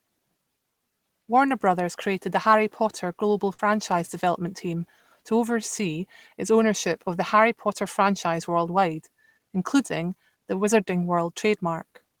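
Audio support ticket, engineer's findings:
Burst of packet loss, 3.53–3.60 s, just before "development team to oversee". Consecutive packets lost or late at the receiver; about 60 ms missing. Concealment holds the last sound and fades it for about 50 ms rather than dropping to silence as a hard dropout would. Network/jitter-buffer side.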